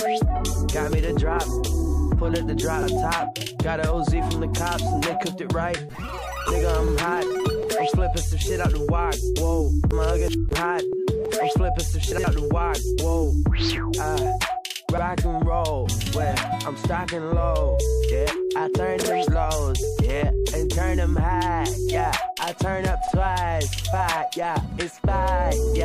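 Overlapping chunks produce a brief stutter at 2.83, 6.88, 10.93, 14.98, 19.03 and 23.08 s: every 4 s join replays 50 ms. At 12.12–12.24 s and 24.66–24.78 s, chunks out of order swap a 60 ms piece one chunk late, giving a jumbled moment, irregular and without repetition.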